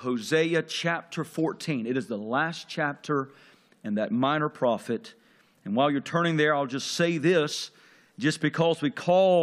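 At 7.51 s a brief glitch cuts through the sound, the mark of damaged data in a compressed stream. A stretch of the encoded bitstream there is corrupt, so the decoder misreads those frames, loses its place, and has to hunt for the next valid frame header before output recovers. On a spectrogram it shows as a thin vertical disturbance lasting under 20 ms. The waveform has a short, abrupt break from the surrounding shape.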